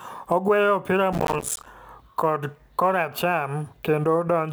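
From 1.13 to 1.66 s there is a burst of processor overload crackle, ending just before "kocho kora cham". Over that half-second, the processing could not keep up, and many short audio buffers missed their deadlines again and again. Each miss dropped in a brief stretch of silence with hard edges, and the spacing of the clicks points to buffers of around 5 ms, with dozens missed. The result is a gritty, tearing crackle over the speech that stops once the load eases.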